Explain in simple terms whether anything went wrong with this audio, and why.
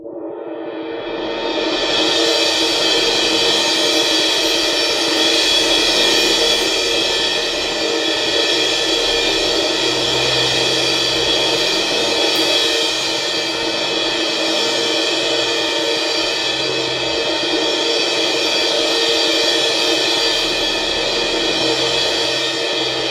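Nothing went wrong here; the music carries on without any hiccups or technical problems that a listener would notice.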